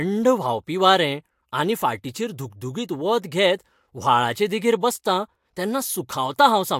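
No technical faults are audible.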